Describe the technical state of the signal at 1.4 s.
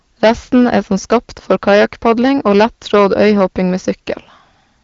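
At 1.4 s the speech has a harsh, crackling fuzz on its louder moments, as it does for the whole clip. This is hard clipping: the signal is driven about 14 dB past what a stage can pass, so a few percent of samples are cut flat, adding bright harmonics. The AMR-WB band limit near 7.1 kHz caps the top of that fuzz.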